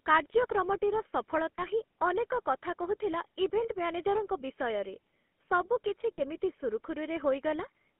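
From start to finish the speech carries the buzzy, gravelly roughness of the GSM full-rate codec, consistent with its 13 kbps mode. The coder rebuilds the voice from a vocal-tract model fed with sparse, regularly spaced pulses, so fine detail in the excitation is lost. The band runs only from about 200 Hz to 3.4 kHz. Unlike simple band-limiting, which just sounds muffled, this roughness sits inside the voice itself.

At 1.56 to 1.63 s, just before "ହିଁ ଅନେକ କଥା କହୁଥିଲା", there is a lost GSM frame. Its length fits a single 20 ms frame. The decoder repeats the previous frame's settings, which gives a brief, rough metallic ring. A second loss comes at 6.15 to 6.20 s, right after "ବିଷୟରେ ସବୁ କିଛି", and points to two frames. Unlike a dropout, which goes silent, or a click, the sound is held and rings briefly.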